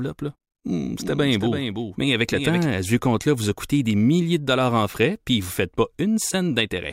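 From 1.00 s to 2.66 s the speech is shadowed by a second, slightly quieter copy of itself, trailing about 300 ms behind and roughly 5 dB down. It has no reverb tail or room colour, and it switches on and off abruptly, ending just before "à ce". This is a doubled audio track, likely from the same signal reaching the mix twice, once through a slower path, so the two copies sit out of step.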